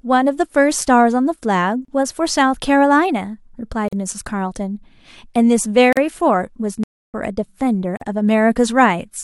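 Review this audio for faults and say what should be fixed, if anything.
Gaps at joins of encoded pieces occur at 1.85 to 1.88 s, 3.88 to 3.93 s, 5.93 to 5.97 s and 7.97 to 8.01 s, repeating every 2 s. The first lasts 33 ms and the rest 43 ms each. Each is a short hole in the running speech with smeared edges. The speech resumes exactly where it broke off. Separately encoded 2-second pieces were joined with each encoder run's leading delay and final-frame padding left in. To prevent it, trim encoder delay and padding from each piece before joining, or encode the stream in one pass.

A playback stall runs from 6.84 to 7.14 s, a silence of about 0.3 s that cuts off the speech mid-flow before it continues. That length is far longer than any codec join produces. The likely cause is the player running out of buffered data or its audio thread being blocked until it recovered. To prevent it, keep a larger playback buffer and make sure nothing blocks the audio thread.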